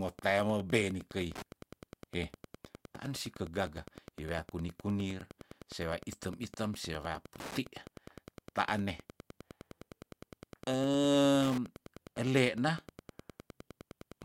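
Throughout the speech, Wi-Fi interference adds a steady tick every 102.4 ms, roughly twenty decibels below the voice. Nearby radio beacons are being rectified by the audio circuit. It sounds like a faint, even ticking about ten times a second. A spectrogram shows evenly spaced vertical broadband lines, and the waveform shows matching spikes.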